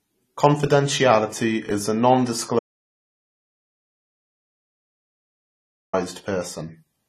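A speech recording with a dull, smeared quality throughout: the top of the spectrum is missing, with nothing above 14 kHz, and sibilants and sustained sounds carry a fizzy, warbling texture. The codec damage is plainly audible. This is likely AAC compression, AAC-LC at a low bitrate that fits roughly 32 kbps, where the encoder lowers its cut-off and quantises the remaining frequency bands so coarsely that holes and substitute noise show up in the spectrum. From 2.59 s to 5.93 s the audio stops abruptly and resumes mid-flow, leaving about 3.34 s of total silence with no room tone underneath. Anything said in that stretch is lost. That points to an audio dropout to silence, most likely the input being lost or muted while the recorder kept writing silence.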